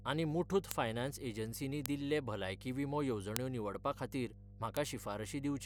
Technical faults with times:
0.00-5.66 mains hum
0.71 bit error spike
1.86 bit error spike
3.36 bit error spike
4.77 bit error spike

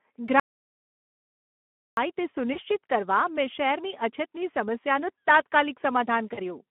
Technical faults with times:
0.00-6.71 Speex codec
0.40-1.97 audio dropout to silence
6.33-6.40 VoIP packet loss concealed by the speech codec

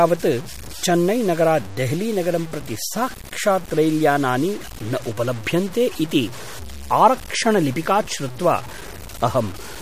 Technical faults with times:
0.00-9.81 low bit depth without dither
0.00-9.81 MP3 compression

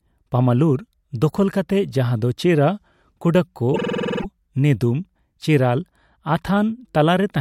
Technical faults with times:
3.73-4.25 repeated frames

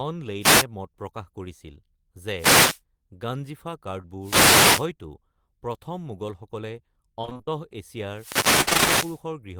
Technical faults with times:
0.40-0.66 wireless microphone noise hit
2.35-2.81 wireless microphone noise hit
4.01-4.05 short concealed packet loss
4.20-4.89 wireless microphone noise hit
7.21-7.49 repeated packet loss (robotic sound)
8.11-9.25 wireless microphone noise hit
8.61-8.88 repeated packet loss (robotic sound)

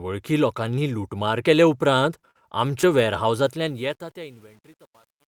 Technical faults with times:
2.05-2.07 lost packet rebuilt from error correction
2.19-2.37 short concealed packet loss
2.51-2.53 lost packet rebuilt from error correction
2.81-2.85 short concealed packet loss
2.83-2.91 lost packet rebuilt from error correction
3.45-5.28 truncation distortion on a fade

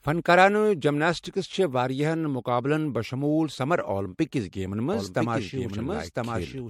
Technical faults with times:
0.00-6.69 generation loss
4.93-6.69 doubled audio track

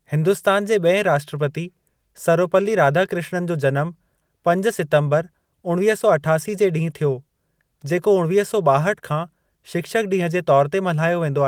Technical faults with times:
none

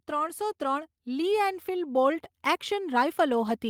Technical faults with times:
0.08-3.69 automatic gain rising

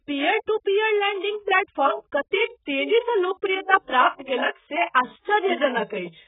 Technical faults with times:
0.00-6.28 AAC compression

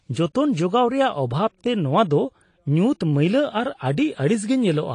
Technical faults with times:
0.00-4.94 AAC compression

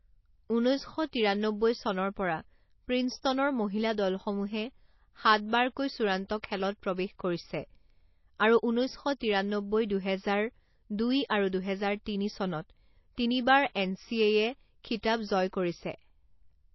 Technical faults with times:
0.00-16.75 MP3 compression
13.73-13.75 pre-echo

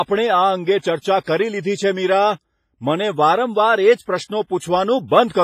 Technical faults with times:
0.00-5.44 WMA compression

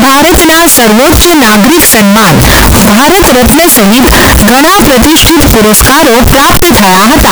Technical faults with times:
0.00-7.31 float read as integer

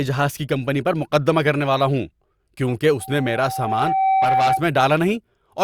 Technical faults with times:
3.00-4.67 loudspeaker feedback squeal

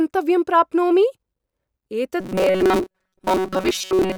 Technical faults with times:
2.20-4.17 robotic sound from repeated short buffers

